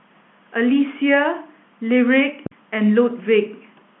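At 2.46 s a phantom power thump cuts into the speech. It is a deep, dull knock that dies away with a decay of 94 ms, and the disturbance ends by 2.88 s. A supply switched on or off on a live input sends a voltage step through the coupling capacitors, and that step reaches the recording as one low pulse. Because the line passes through G.711 telephone coding, the thump is band-limited, with nothing above 3.9 kHz.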